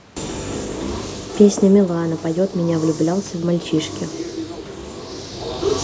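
From 2.01 to 4.01 s, automatic gain rising occurs: after the microphone input falls by about 12 dB, the call's gain control judges the signal too quiet and slowly raises its gain by about 4 dB across those two seconds. The speech and the room noise behind it swell up together, a gradual lift rather than a jump. Separately, the talker shifts position at roughly 1 s and again near 5 s, which changes the level without being a fault.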